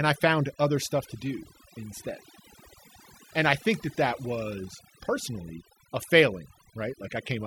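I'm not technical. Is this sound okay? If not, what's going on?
No. Overdone noise removal runs through the whole recording. A cleanup tool set too strong cuts away background noise but also quiet parts of the speech, leaving near-silence with twinkling specks between phrases.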